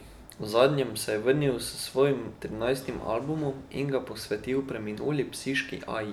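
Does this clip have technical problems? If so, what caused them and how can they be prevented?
No, no technical faults are audible.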